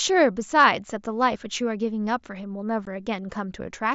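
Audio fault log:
2.85 s, unconcealed Bluetooth headset packet loss: a gap of about 15 ms opens in the speech, which fits two lost frames on the headset link. Nothing fills the hole, so the signal drops abruptly to silence and snaps back. On a waveform it shows as a flat notch with sharp edges. On a spectrogram it is a thin vertical blank strip, and the wideband mSBC speech band up to 8 kHz resumes on either side.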